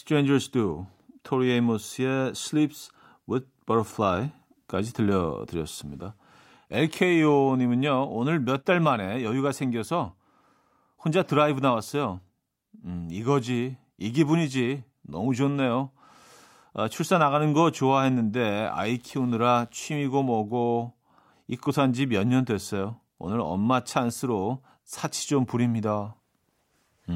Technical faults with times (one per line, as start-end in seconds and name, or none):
18.36-19.86 mains buzz